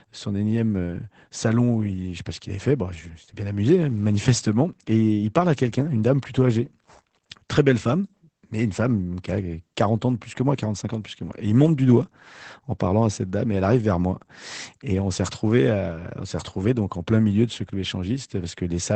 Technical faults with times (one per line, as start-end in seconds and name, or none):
0.00-18.95 Opus voice compression